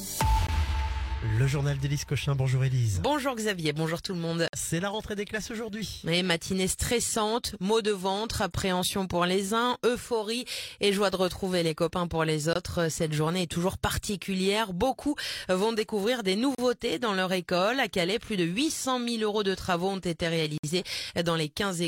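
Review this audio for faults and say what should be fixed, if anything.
Gaps between stream segments cut the sound at 0.47, 4.48–4.53, 8.53, 12.53–12.56, 16.55–16.58 and 20.58–20.64 s, every 4 s. Misaligned segment time stamps leave holes of 14 to 58 ms, filled with hard-edged silence. Make each segment start exactly where the previous one ends.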